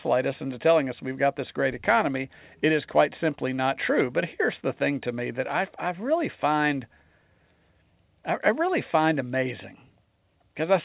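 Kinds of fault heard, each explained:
Nothing stood out on listening to this speech, which comes through a call path whose band stops at about 4 kHz, as expected for a G.711 mu-law telephone codec.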